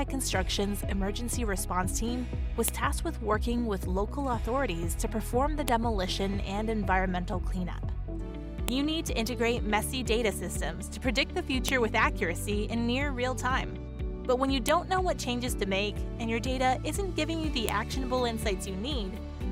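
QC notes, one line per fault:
2.68, 5.68, 8.68, 11.69, 14.69 and 17.69 s: file header played as audio. The stream is assembled from pieces 3.0 s long, and each piece's header was left in place, so its few dozen bytes of metadata are decoded as sample values. Those values are arbitrary and large relative to the surrounding signal, so each join produces a sharp, loud click or snap lasting only a millisecond or so, regardless of what the sound is doing at that moment.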